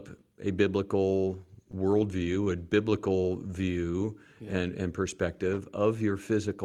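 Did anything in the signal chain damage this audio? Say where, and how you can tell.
Yes. Repeated stalls (stutter) run from 1.51 to 2.49 s, just after "a biblical". Eight short hiccups break the flow, the longest about 23 ms, totalling roughly 110 ms of stretched sound, about 11% of that stretch. Nothing drops out, so this is a network and jitter-buffer problem: packets arrived late, the buffer ran dry again and again, and the receiver kept extending the last sound each time until fresh audio came in.

A jitter buffer slow-down follows from 2.90 to 4.46 s, leading into "and and perspective". The sound drags at about 93% speed with unchanged pitch, adding roughly 124 ms. The buffer was running low or had just raised its target delay, so the receiver rebuilt its reserve by repeating single pitch periods and slivers of pauses many times over. That is why sounds there come out drawn out rather than shifted in pitch.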